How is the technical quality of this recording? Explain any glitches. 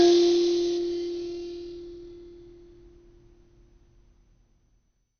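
The quality is poor. The music sounds dull and gurgly throughout, most likely from heavy MP2 compression at a low bitrate, perhaps around 48 kbps. Starved upper sub-bands switch off, leaving nothing above 6.5 kHz. Coarse quantisation adds granular, flickering distortion.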